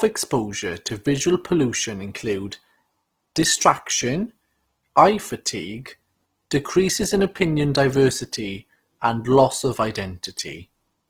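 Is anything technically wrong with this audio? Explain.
Yes. Throughout the recording, the speech has been squeezed through a low-bitrate codec, likely Opus compression running in its music-oriented CELT mode at something like 16 kbps. With so few bits, the encoder preserves each band's overall energy but fills the detail with folded or synthetic noise. The full bandwidth, up to about 20.3 kHz, survives, but the voice turns plainly grainy and rough, with a noisy, sandpapery texture.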